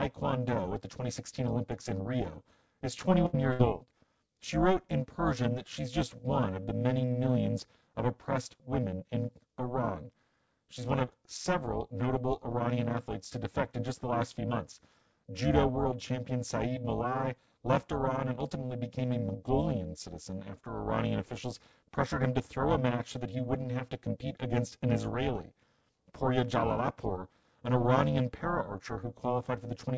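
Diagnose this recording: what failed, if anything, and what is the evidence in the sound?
Overlap-add ripple runs through the whole speech recording. It comes from a frame-based processing stage. Windowed frames were resynthesised with an overlap that does not sum to constant gain, so the level dips by about 60 dB once per frame, around 400 times a second. The result is a metallic buzz with extra tones around each note rather than a slow tremolo or a codec warble.

A burst of packet loss, a network fault, hits twice: 3.26 to 3.35 s and 3.53 to 3.61 s. Each time the receiver stretches the last sound into a held, decaying buzz or hiss of roughly 70 and 60 ms. About 80 and 60 ms of speech are then skipped, so the audio jumps ahead rather than simply going quiet.

Short concealed packet loss, also on the network side, falls at 3.85 to 3.89 s. About 20 ms went missing and was patched by continuing the preceding sound. 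It is heard as a brief smear or wobble, far shorter than the two bursts and without their sustained buzz. The G.722 path at 64 kbps carries nothing above 8 kHz.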